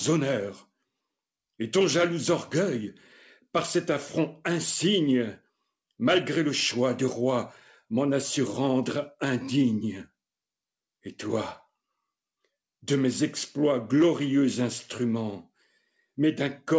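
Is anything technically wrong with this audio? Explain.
Yes. Sound cut by the noise suppressor occurs between 15.61 and 16.01 s. The call's noise suppressor mistook part of the sound for background noise and turned it down more than everything around it. The level sinks by up to about 18 dB, and the affected stretches add up to roughly 150 ms within that window. The audio there dips and thins out instead of carrying through at its natural level. Nothing above 8 kHz is present, which fits a G.722 call path at 64 kbps.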